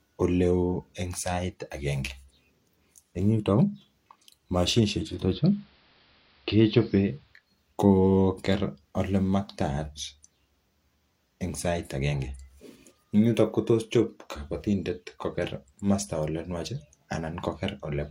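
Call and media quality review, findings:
4.88–7.53 s: digital radio blending to analogue AM; 0.47 s crossfade, hiss about 35 dB below signal, about 2 dB level shift. Hiss rules out codec bandwidth drop.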